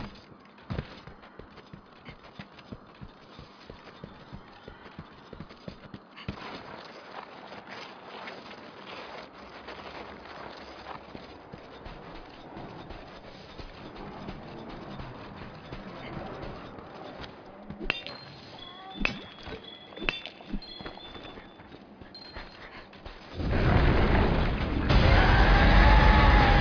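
No technical faults can be heard anywhere in the audio.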